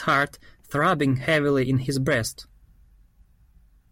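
No technical faults are audible anywhere in the speech.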